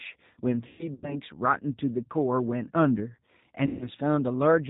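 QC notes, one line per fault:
Throughout: G.729 codec. Nothing comes through above 4 kHz, and the speech has that rough, slightly synthetic edge you get when it's rebuilt from a vocal tract filter, a pitch predictor and a few pulses per frame. The damage is plainly audible and fits 8 kbit/s G.729A.
0.67–1.20 s and 3.66–3.90 s: VoIP packet loss concealed by the speech codec. In the first stretch, about 210 ms goes missing in patches over roughly 360 ms, the longest gap 120 ms; the second loses about 150 ms. Each time the decoder stretches its last pitch and filter into a buzzy tone or a coloured noise that fades, and the voice stays weak for a bit after packets return.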